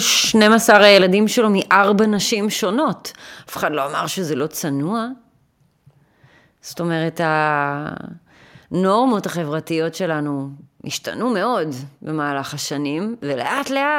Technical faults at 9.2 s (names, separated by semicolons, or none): microphone volume stepped down